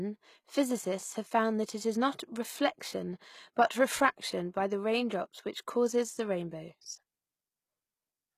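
All the way through, the speech carries plainly audible HE-AAC compression damage, likely from a low bitrate around 20 kbps: the treble is rebuilt from copied lower bands, so s sounds come out gritty and lispy.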